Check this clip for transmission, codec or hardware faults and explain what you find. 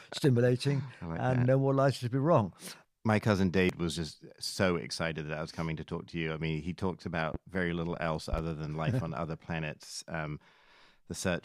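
Two kinds of fault are present: a skip from lost compressed frames and three loud pops in two places.

At 3.69 s the speech jumps forward, with roughly a fifth of a second missing. This is compressed frames skipped: about two whole frames never reached playback, either missing from the stream or rejected by the decoder as damaged. The size of the gap points to frames of about 93 ms.

A single sharp pop lands from 7.34 to 7.37 s, and a quick pair of pops follows from 8.33 to 8.41 s. Each peaks at around 10 dB above the speech, which carries on unbroken underneath. These are loud pops, likely caused by a sudden voltage step or pulse entering the signal path, from a connector, switch, static discharge or driver glitch. The circuitry after that point shapes the pulse into a thump-like pop, and in the second event it sounds as a double hit.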